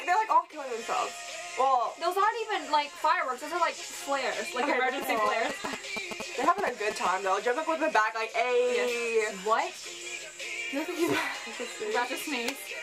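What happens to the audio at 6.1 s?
At 6.1 s the sound is overlaid by a galloping dit-dit-dit of short buzzes pitched near 217 Hz, running from 5.02 to 7.07 s and sitting only a little below the level of the wanted audio. These are GSM signalling bursts: a nearby 2G phone is exchanging brief groups of radio bursts with the network, and the audio circuitry rectifies them, turning their repetition rate of about 217 Hz into audible interference.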